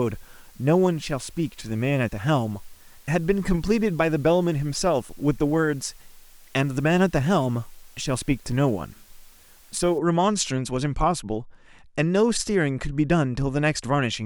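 A constant, even hiss sits under the speech from 0.0 to 9.98 s, about 30 dB below it: low bit depth with dither, the signal rounded to 8 bits.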